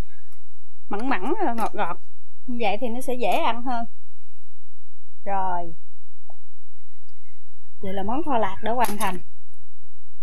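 From start to finish the waveform carries a DC offset of about -14 dBFS: the whole trace sits shifted off the zero line by a constant amount, eating headroom on one side. It is inaudible as such, but a spectrogram shows a steady band pinned at 0 Hz.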